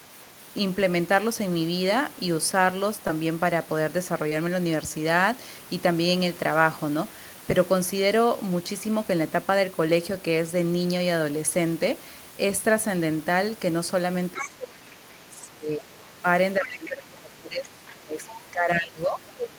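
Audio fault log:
3.07–3.11 s and 4.29–4.33 s, short concealed packet loss: About 20 ms of audio failed to arrive in time at each point. The decoder bridged each gap by extending the sound it had just played, for roughly 15 ms at the first and 20 ms at the second, then blended back into the real signal. Each heals into a brief smear or wobble rather than a hard dropout, and any quick consonant caught in the gap can disappear.
14.34–15.10 s, 15.31–16.26 s and 16.58 s to the end, speech suppressed in double talk: The talker's level sags and breaks up in pieces, falling by around 20 dB at its deepest, so stretches sound thin, distant or briefly cut. In the first two spans the damage adds up to about 0.7 s each, and the last span runs to the clip's end. This is likely an echo canceller that could not tell the talker from loudspeaker echo while both sides spoke at once, and so turned the microphone signal down.
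14.38–14.50 s, 16.70–16.88 s and 18.29–18.36 s, other side's voice leaking through: Short scraps of a second voice surface under the talker, about 10 dB, 15 dB and 20 dB below the speech respectively. The source is likely loudspeaker playback reaching the microphone, which the cancellation did not fully strip out. These scraps fall inside the suppressed spans, where the same overlap of both sides is at work.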